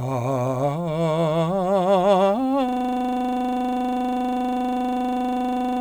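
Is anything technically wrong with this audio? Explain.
Yes. From 2.69 s to the end, the music is replaced by a system hang loop. The machine stalled while the audio hardware kept replaying its last 40 ms buffer, so one fragment repeats exactly at 25 Hz, heard as a rough, steady buzz.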